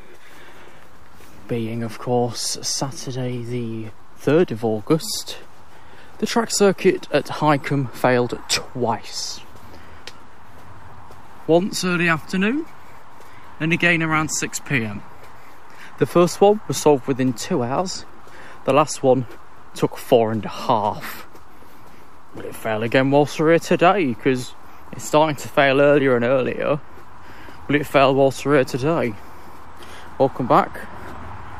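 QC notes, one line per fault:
Throughout: DC offset, the entire waveform sitting shifted off zero by a constant of about -33 dBFS. It is inaudible as a tone but eats headroom. Unlike rumble or hum, the energy is fixed at 0 Hz and never fluctuates.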